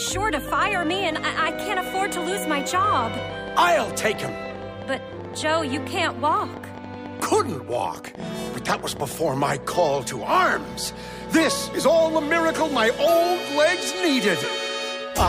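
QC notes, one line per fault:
0.08–9.48 s: train of clicks, 13.1 per second, unevenly spaced, roughly as loud as the sound, likely interference; thin vertical spikes on the spectrogram.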